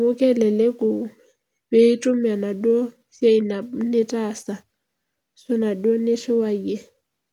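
Speech, with no audible faults.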